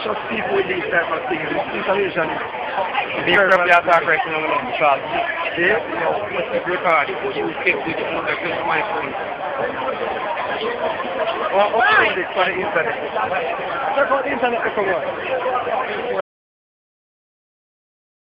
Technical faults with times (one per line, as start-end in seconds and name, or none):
16.21-18.33 audio dropout to silence